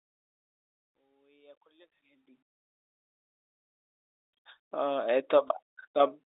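At 5.48 to 5.50 s, a single packet of about 20 ms went missing, and packet loss with pitch repetition filled the gap, giving a brief, slightly held buzz.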